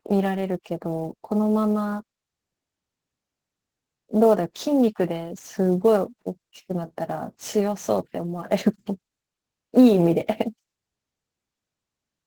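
A faint hiss-like roughness runs through the speech from start to finish, strongest on loud and sibilant sounds and gone in the pauses. That is sample clock jitter: the converter's clock wobbles by around ten microseconds, and the timing error leaves noise roughly 30 dB below the signal.

For the whole clip the speech also sounds somewhat hoarse and faintly robotic, though the band stays wide, reaching about 20.1 kHz. This plainly audible damage is Opus voice compression in hybrid mode, at a rate that points to around 16 kbps. Linear prediction codes the lower band and a transform layer fills in above 8 kHz, both too coarsely.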